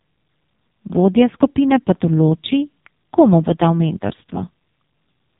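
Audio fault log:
throughout: AMR narrowband mobile codec. The speech was squeezed through AMR-NB's 8 kHz vocal-tract model at a low bit budget, which fits its 5.15 kbps mode, so nothing above 3.8 kHz survives and starved pulse excitation leaves the voice muffled, buzzy and synthetic.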